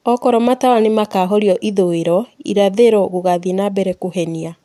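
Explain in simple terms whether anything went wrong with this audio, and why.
Nothing went wrong here: the speech comes through steady and natural, with no glitches, dropouts or odd sounds to trip over.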